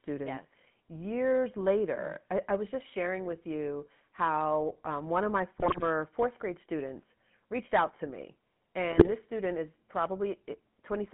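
The whole clip carries the sound of the GSM full-rate codec, consistent with the 13 kbps first-generation mobile coder. Its vocal-tract model driven by a sparse, regularly spaced pulse excitation leaves the speech with a plainly audible buzzy, gravelly roughness. The passband runs only from about 150 Hz to 3.5 kHz, so the low end is thin and everything above the band is gone, giving a narrow, boxed-in telephone quality.

From 5.60 to 5.83 s, after "um one of my" and before "fourth grade students reached", GSM bit errors break the decoding. Corrupted filter, pitch and gain parameters distort the spectrum and throw the level around from frame to frame, so the passage turns into squawks, pops and gargling. The density of the damage fits a few percent of bits flipped. A second, slightly milder burst runs from 8.92 to 9.13 s, between "reached out to me" and "student is", with the same garbled, popping character.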